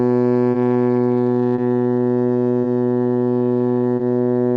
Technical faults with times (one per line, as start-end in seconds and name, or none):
0.00-4.57 clock drift between sender and receiver
0.52-0.56 short stall from a late packet
1.56-1.60 short stall from a late packet
2.62-2.66 short stall from a late packet
3.96-4.01 short stall from a late packet